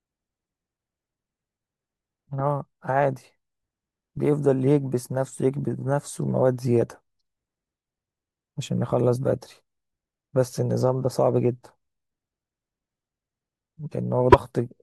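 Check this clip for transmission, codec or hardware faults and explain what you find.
One fault turns up, right at the end of the speech. Damaged data in a compressed stream, from 14.29 to 14.35 s: a short stretch of the encoded stream arrives corrupted, so the decoder cannot parse those frames correctly, loses its place, and hunts for the next valid frame header before playback resumes. Across those roughly 50 milliseconds the sound breaks up briefly.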